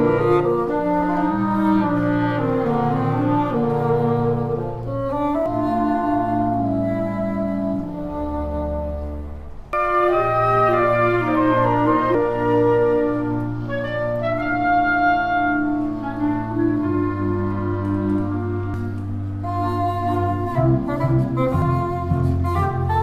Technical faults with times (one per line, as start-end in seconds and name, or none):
5.46 damaged data in a compressed stream
9.73 damaged data in a compressed stream
12.15 damaged data in a compressed stream
18.74 damaged data in a compressed stream
21.62 damaged data in a compressed stream